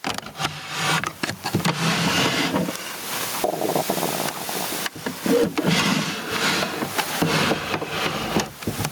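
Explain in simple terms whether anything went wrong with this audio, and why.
The recording level was likely set far too high, so an automatic limiter kept yanking the volume down on every loud sound. That causes gain pumping throughout: loud and soft parts end up closer in level, and everything sounds squashed.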